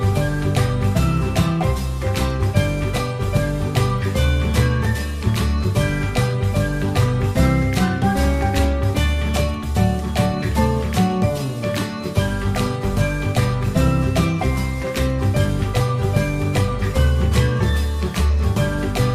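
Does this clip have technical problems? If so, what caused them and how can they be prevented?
No, the signal comes through intact, with no dropouts, distortion or other technical faults audible anywhere in the clip.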